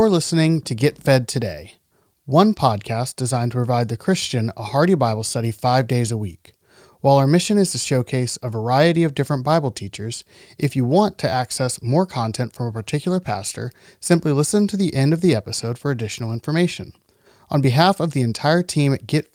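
No technical faults are audible.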